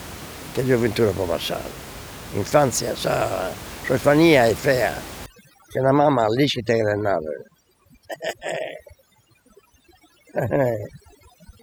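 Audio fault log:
5.26 s to 11.63 s, overdone noise removal. From 5.26 s to the end, the noise reduction clamps down far too hard. Before that point the room noise sits about 16 dB below the speech. After it, that background drops. Twinkling specks remain. Frequency bands close to the noise estimate get pushed right down or switched off. Quiet parts of the speech fall into them.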